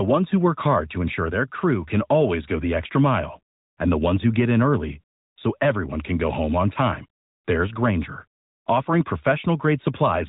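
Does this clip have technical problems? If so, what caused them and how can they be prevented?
No, this clip has no technical problems to report.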